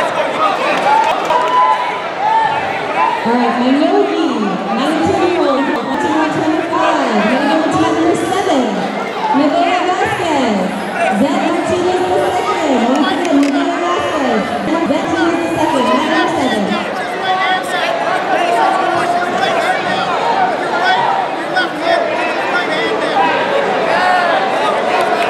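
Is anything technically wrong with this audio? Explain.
Yes, there are chunks out of order at 0.56 to 1.30 s, 5.57 to 5.94 s and 14.68 to 15.05 s. A 0.19 s block plays late, three blocks late first, then one block late twice, giving jumbled moments. The waveform shows abrupt discontinuities at each of the three joins in every event, and the spectrogram shows vertical broadband lines with mismatched content on either side.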